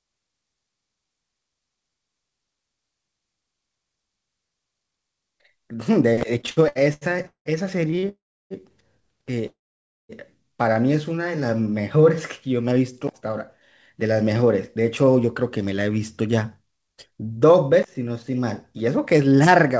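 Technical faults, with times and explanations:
6.41 to 8.06 s, repeated stalls (stutter): The sound keeps catching and dragging here, with ten short holds, the longest 190 ms. Packets were arriving late, so the jitter buffer kept running dry and the receiver stretched the last sound to fill about 508 ms, nearly a third of that stretch. Nothing actually gets lost.
8.09 to 8.53 s and 9.46 to 10.12 s, call audio freeze: The sound hangs and then drops out, going quiet for 320 ms and then 540 ms before picking up exactly where it stopped. This is likely packets held up in transit emptying the buffer, so gaps of 416 ms and 628 ms get inserted with nothing missing.
11.37 to 12.05 s, jitter buffer slow-down: Things get a bit drawn out here, running at 89% speed with no pitch change. The buffer was rebuilding its reserve by repeating single pitch periods over and over, which adds 82 ms in total.
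13.96 to 19.51 s, jitter buffer speed-up: Everything runs at 107% speed while the pitch stays put, so it sounds slightly hurried. The buffer had too much queued up and trimmed tiny pitch-period-sized chunks repeatedly, cutting about 0.4 s overall.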